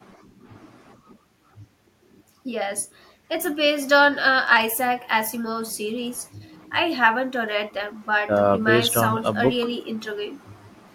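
A speech recording with no technical faults to report. Nothing in it calls for a time or a cause.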